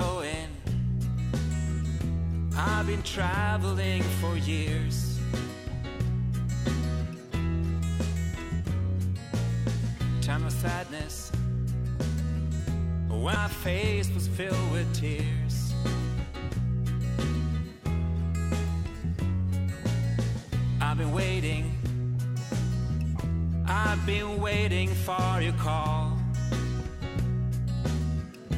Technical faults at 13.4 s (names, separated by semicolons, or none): CD skip